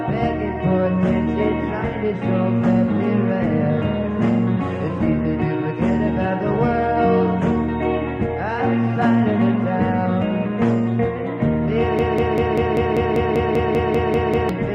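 At 11.99 s the audio locks into a broken-record loop. A fragment about 196 ms long repeats exactly, back to back, 13 times. It runs until 14.49 s. The result is a rapid, mechanical stutter at roughly five repeats per second. The likely cause is a player, encoder or stream that stalled and kept resending the last piece it held. Whatever should have played during those two and a half seconds is lost.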